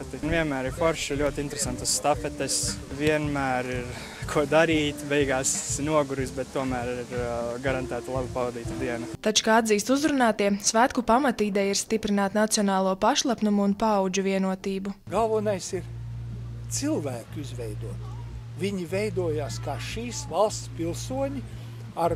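At 1.27 to 1.29 s a single loud pop sits on top of the sound, which continues underneath, peaking roughly 10 dB above the surrounding signal. It is likely a brief voltage pulse from a plug, switch or static discharge. The waveform shows a tall, narrow spike; the spectrogram shows a thin vertical stripe spanning all frequencies.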